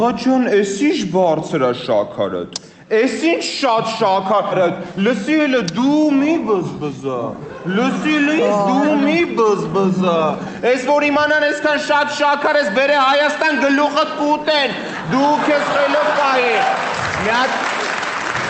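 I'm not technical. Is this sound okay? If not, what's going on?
No. A skip ahead happens at about 4.51 to 4.53 s. Later sound was already waiting, and a stretch of roughly a second and a half was dropped, so playback skipped past it. The sound then jumps straight from before the gap to after it, with no silence in between, so that piece of audio is simply missing and the two sides are stitched together.

A jitter buffer speed-up follows from about 4.61 to 9.4 s. The receiving end was holding more audio than it wanted, so it kept snipping out tiny slivers, each far too short to notice alone. Together they add up to about a third of a second. The sound plays about 6% faster without changing pitch, so that stretch feels slightly rushed.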